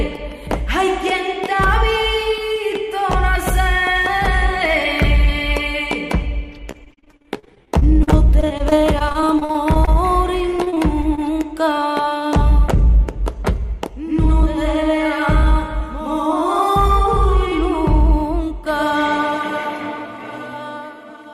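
Repeated packet loss (robotic sound) at 6.71–9.89 s and 10.57–11.19 s: short holes up to 40 ms are patched by continuing the last sound, covering 16–20% of each span and leaving choppy audio. Jitter buffer speed-up at 13.31–17.34 s: the receiver trims tiny pitch-period slices, about 70 ms in total, so the audio runs at 102% speed with unchanged pitch.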